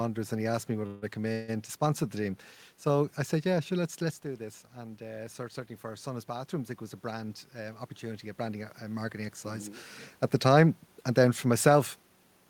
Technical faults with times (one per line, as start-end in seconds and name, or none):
0.86-1.04 call audio freeze
1.32-1.50 call audio freeze
4.79-9.85 automatic gain rising
7.22-8.74 jitter buffer speed-up
11.46-12.47 jitter buffer speed-up